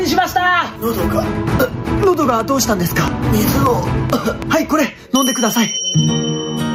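Right from the start there's gain pumping across the whole clip. The level keeps getting pulled down whenever something loud comes through, swinging by something like 15 dB. It feels squashed, with loud and quiet parts pushed close together. The likely cause is input gain set way too hot for the mic, with a fast limiter or compressor clamping down on every peak.

Then from 2.03 s to 5.28 s there's a train of clicks, around ten of them at about 3.1 per second, spaced unevenly rather than on a steady tick. They're all much the same shape and poke out roughly 10 dB above the sound, so you hear them as popping on top of everything, in the quiet stretches too. That's likely interference from nearby gear or a faulty connection or power supply.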